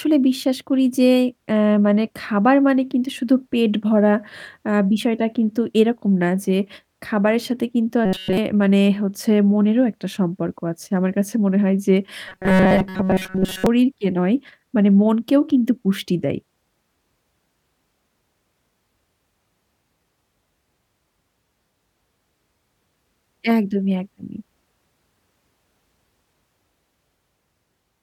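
Robotic sound from repeated short buffers affects this speech clip at 8.06–8.38 s and 12.29–13.66 s: a rigid metallic buzz at 188 Hz, likely from replaying a 5.3 ms slice while new audio arrived late. The first stretch buzzes throughout, the second mostly.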